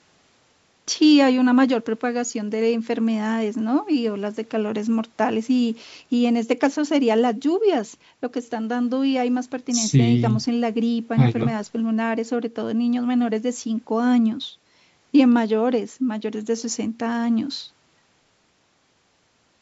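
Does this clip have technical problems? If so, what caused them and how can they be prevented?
No, nothing in this speech recording stood out as a technical problem on listening, so there is nothing here that needs preventing.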